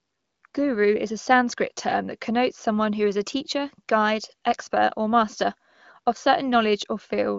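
Speech with no technical faults, carried on AMR wideband (HD Voice) coding at a high rate, likely around 23 kbit/s, with content stopping near 7.2 kHz as that codec band-limits it and no audible coding damage.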